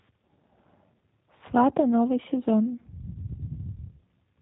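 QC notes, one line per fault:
Throughout, G.729 codec: the speech was coded by a low-rate CELP scheme that keeps only a vocal tract filter, a pitch predictor and a handful of pulses per 5 ms subframe, which fits the 8 kbit/s G.729A variant. Nothing above 4 kHz survives, so the voice sounds narrowband and boxed in, and the sparse pulse excitation gives it a plainly audible rough, buzzy, synthetic edge.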